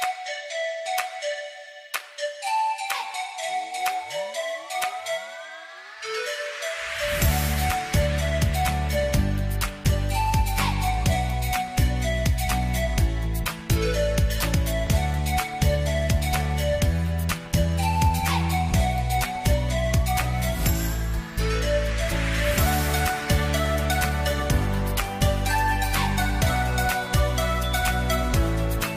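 No technical faults can be heard anywhere in the audio; the signal stays continuous and steady throughout.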